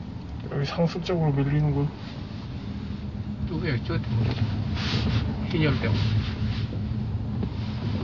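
From start to finish the sound is dull, with nothing above about 7.1 kHz and plainly audible smearing, likely AAC compression at a low bitrate around 32 kbps.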